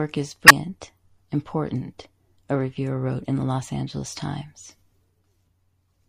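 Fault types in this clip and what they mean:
MP3 compression: Throughout the speech, the treble is cut off and the quieter detail sounds watery and swirling, as if parts of the spectrum flicker in and out. Sibilants turn metallic and consonant onsets blur. This is likely lossy MP3 encoding at a low bitrate, about 64 kbps. The encoder ran short of bits, so it dropped the high band and zeroed weak frequency lines, and those lines switch on and off from frame to frame.
Damaged data in a compressed stream: From 0.46 to 0.51 s a brief disturbance interrupts the speech, a short glitch that does not belong to the surrounding sound. Some bytes of the compressed stream were lost or corrupted here. The decoder read those frames wrongly or rejected them, lost its place in the bitstream, and produced garbage until it found the next valid frame header and recovered.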